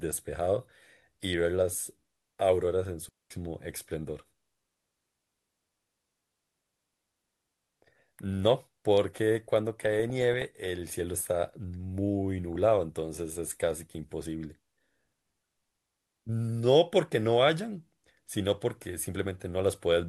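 At 3.09 s a digital wireless dropout cuts the speech to a clean hole of near silence for about 216 ms, running to 3.31 s. The receiver lost too much data on the link and muted with a very short fade, leaving no noise burst on either side.

DAB burbling appears from 9.74 to 10.66 s and again briefly at 12.56 s. Under weak reception, bit errors at a fraction of a percent slip past error correction, putting short blips of noise in single sub-bands and making sub-bands jump in level for up to a frame.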